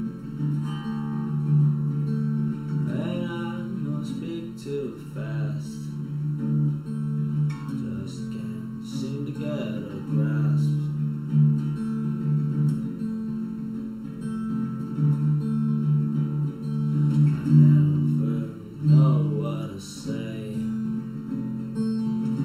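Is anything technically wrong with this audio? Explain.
Yes, there's channel delay causing comb filtering, and it runs the whole length of the clip. One channel arrives a bit under a millisecond behind the other, and when the two get folded to mono, whatever they share cancels at regularly spaced frequencies. The first notch sits somewhere around 700 Hz, with more stacked above it at even intervals. That's why everything sounds hollow and phasey.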